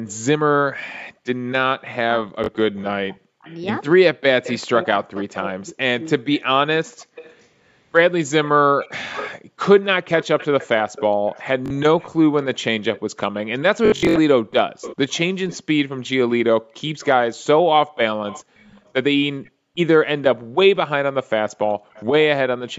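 Echo leak runs from 0.08 to 22.05 s: a delayed copy of the speech trails the original by about 0.4 s, roughly 15 dB below it. The likely cause is a far-end loudspeaker whose echo canceller let part of its microphone pickup return down the line.

Speech suppressed in double talk appears between 0.77 and 6.06 s, about two seconds in all. While both sides overlap, the talker's speech sinks by as much as around 40 dB, likely because the canceller couldn't tell the talker from the echo and turned both down.

Background gated by the echo canceller occurs at 1.17 to 1.24 s, 6.87 to 9.61 s (about 0.4 s affected in total) and 16.61 to 21.93 s (about one second in total). While the loudspeaker plays, the microphone is clamped hard, so the room tone drops by about 40 dB and returns when the canceller releases. The call's microphone processing also stops all content above 8 kHz.

Bluetooth stutter strikes at 2.44 s and 11.66 s, each a 43 ms gap consistent with two lost packets, filled by a repeated slice of sound. 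From 13.86 to 14.16 s about 213 ms goes missing in scattered runs up to 64 ms, which produces a buzzing, machine-gun repetition before the audio jumps ahead.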